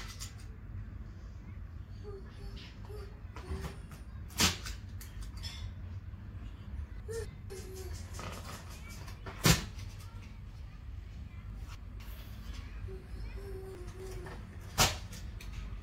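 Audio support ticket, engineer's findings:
Chunks out of order at 7.0–7.5 s, 11.5–12.0 s and 13.75–14.25 s. Jumbled half-second each time. Two 250 ms chunks swapped, one arriving a chunk late. Nothing missing. Probable buffer or write-queue ordering fault. Three hard joins per event.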